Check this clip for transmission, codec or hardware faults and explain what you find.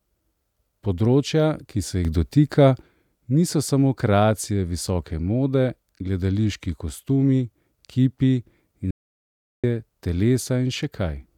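Two faults stand out in the speech: a stepped level change and a short loss of signal.

From 2.05 s to 2.82 s there is a sudden gain jump of about 6 dB. The likely cause is a digital gain setting applied without a ramp. Speech and background noise step up together at the boundary.

From 8.91 s to 9.64 s, about 0.73 s, an audio dropout to silence occurs, likely from the input link failing while zeros kept being written. The speech cuts off mid-flow, the gap holds no room tone, and that audio is lost.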